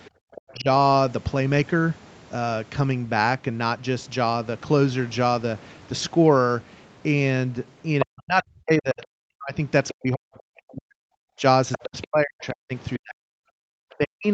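At 0.05 s a faint second voice enters, about 20 dB below the talker, and runs to 0.53 s. This is the other side's voice leaking through. The far end plays on a loudspeaker, and the echo canceller likely failed to remove all of it from the microphone.

From 0.10 to 0.24 s the room background drops out, by as much as about 38 dB, for roughly 150 ms. This is background gated by the echo canceller. While the loudspeaker played, the canceller clamped the microphone hard. The room tone vanishes for a moment and then returns.

From 0.52 to 0.67 s the talker's own voice dips by about 10 dB. This is speech suppressed in double talk. Both sides were likely talking at once, so the canceller turned the talker down along with the echo.

The leak returns at 7.99 s, loud this time, only about 5 dB under the talker. From 8.03 to 14.26 s the talker is suppressed in double talk again, in pieces that add up to about 4 s. 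The deepest cuts reach roughly 40 dB, so the voice drops out in chunks. Through this stretch the other side keeps leaking through. There are brief scraps at 9.02 s, about 30 dB down, and at 9.88 s, about 15 dB down. A longer run from 11.72 to 12.46 s sits about 10 dB down.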